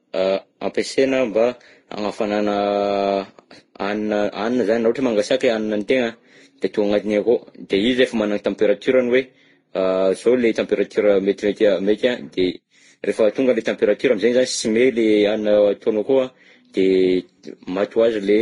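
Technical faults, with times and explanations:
Throughout: transcoding between lossy codecs. The speech has nothing above 10.5 kHz, so it sounds dull and closed in. Smeared, swirling and grainy artefacts of different kinds are heard together. This is likely repeated lossy coding. The sound fits a chain of low-rate codecs, such as Vorbis, then Opus, then Vorbis again, each near 32 kbit/s. Each pass spends its few bits on the earlier damage and adds its own. The lowest cut-off in the chain remains.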